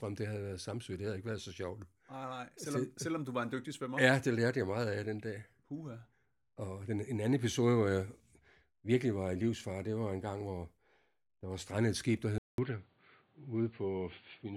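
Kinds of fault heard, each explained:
Input switched to a poorer device: after "strandet et skib der", a 200 ms gap, then dull speech with faint new background noise, cut above 4.6 kHz, likely from a change of input device.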